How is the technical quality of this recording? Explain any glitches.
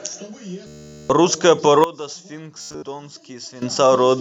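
The recording has clear technical faults: two episodes of Bluetooth stutter and one stretch of sudden gain change.

From 0.67 to 1.10 s, and again from 2.58 to 2.83 s, the wireless link failed to deliver audio in time, and the receiver filled the gaps by replaying its last short buffer. The first gap loses about 0.43 s in one continuous run. The second loses 200 ms scattered across 240 ms, with its longest unbroken gap about 93 ms. Both episodes are heard as a buzzing, machine-gun repetition of a tiny slice of speech. Afterwards the speech picks up further along, with the lost material simply missing.

From 1.84 to 3.62 s the level drops abruptly by about 15 dB and then springs back just as abruptly. The speech and the background noise fall and rise together, so the whole sound steps down and up rather than the talker getting quieter. That points to a sudden gain jump, likely a digital gain setting applied instantly without any ramp, which can also leave an audible edge at each switch.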